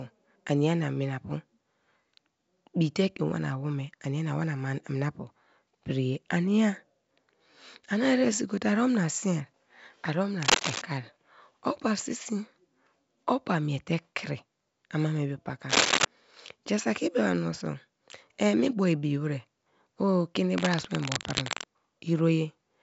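Cable scratch noise at 10.42–10.83 s, 15.69–16.05 s and, after "o keni", 20.58–21.67 s: dense, uneven scratching bursts, the first two slightly louder than the speech and the last about level with it. This is likely a worn cable or connector whose contact resistance flickered as it moved.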